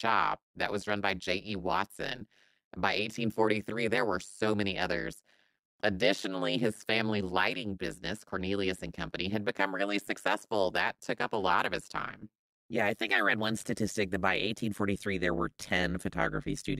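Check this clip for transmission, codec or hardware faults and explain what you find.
The clip has one fault, overlap-add ripple, present across the whole recording. The speech was split into windowed frames and rejoined with an overlap whose gains don't sum evenly, so the level dips by about 60 dB once per frame, at around 100 Hz. It sounds like a harsh, metallic buzz with extra tones around each note. A waveform shows a comb of regular notches in the envelope, and a spectrogram shows evenly spaced vertical stripes.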